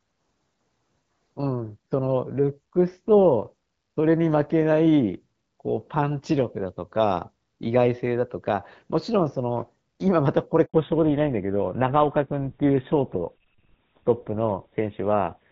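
At 10.66 s the call is handed from one network to another, and no speech frames arrive while the link switches over. The sound dies away almost at once and stays silent for 80 ms, until 10.74 s, and whatever was said in that handover gap is lost.

From 10.74 s to the end, the call falls back to narrowband. The light, clear character before the gap fits HD Voice around 12.65 kbit/s, and the new sound points to an older full-rate GSM codec. Nothing above 4 kHz survives, so the speech turns duller and rougher.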